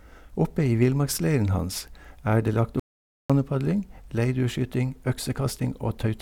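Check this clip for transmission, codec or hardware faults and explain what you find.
There is one fault: an audio dropout to silence. At 2.80 s, just after "det lagt", the speech cuts off abruptly. Silence follows until 3.30 s, half a second with no room tone at all. The input was most likely lost for that moment, through a disconnect, a link failure or a brief mute, while the recorder kept writing silence. Whatever was spoken in that half-second is gone, and the speech resumes mid-flow.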